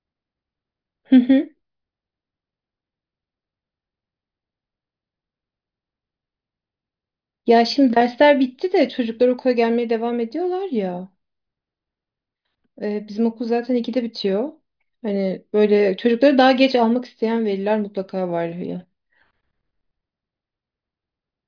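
No technical fault can be heard anywhere in the speech. Nothing in the audio needs a time mark or an explanation.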